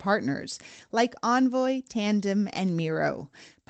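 No faults heard in the speech; the top end stops at about 8 kHz, which fits the normal band limit of a call codec on this path.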